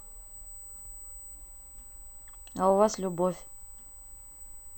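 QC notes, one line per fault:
Throughout, USB whine: there's a steady, fixed-pitch tone sitting at 8 kHz under the speech, roughly 20 dB down. That's the bus's 125-microsecond microframe rhythm leaking in through power or ground, so it stays locked at that pitch.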